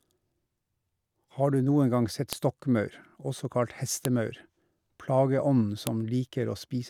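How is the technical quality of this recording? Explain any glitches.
The recording is marred by three sharp clicks in the speech. They come at 2.33 s, just after "du noen gang sett", at 4.05 s, after "også kalt", and at 5.87 s. Each is a file header played as audio. Separate WAV pieces were joined without stripping their headers. Those few dozen bytes of metadata were read as sample values. The result is a brief, loud snap at each join, unrelated to the speech around it.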